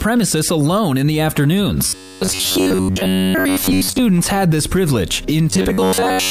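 From 1.88 to 4.01 s and again from 5.50 s to the end, the sound turns into a rigid, metallic buzz near 94 Hz, robotic sound likely from repeating short buffers of about 11 ms, replacing most of the audio. A spectrogram shows evenly spaced harmonic lines, and the waveform shows an identical repeating cycle.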